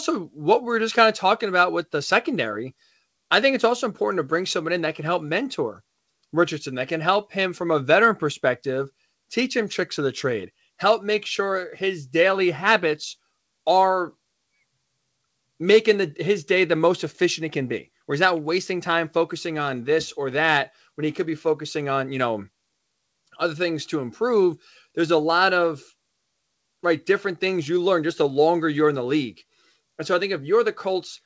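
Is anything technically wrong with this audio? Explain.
No, the speech arrives intact through the call path, with its content stopping at 8 kHz as a wideband call codec such as G.722 would leave it, and no fault can be heard in the signal.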